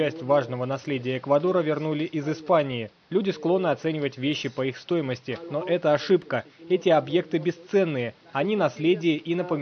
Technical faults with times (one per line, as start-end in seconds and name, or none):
none